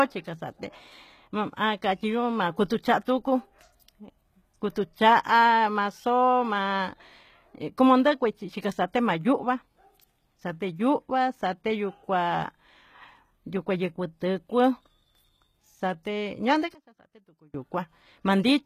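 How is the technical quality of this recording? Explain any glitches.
The technical quality is compromised by plainly audible codec damage across the whole clip and a sudden collapse in level for under a second near the end.

From start to finish, the speech carries coded-sounding treble that stops dead at about 14.9 kHz. The likely cause is HE-AAC compression at a rate that fits roughly 20 kbps. Only the lower spectrum is truly coded; the upper band is rebuilt by copying lower bands upward under a coarse envelope. That is why s sounds come across gritty or lispy rather than simply dull. A plain low-pass or low-rate MP3 would remove the treble, but here it is present and synthetic, with harmonics that fail to line up across the crossover.

From 16.74 to 17.54 s, the whole signal drops by about 24 dB, background included, leaving a faint residue before full level returns. This is likely one channel inverted in a stereo source that was then summed to mono. 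The sound common to both channels cancels, and only their small mismatch survives. Unlike a dropout or a gate, the audio does not go silent. A faint trace of the same material continues underneath.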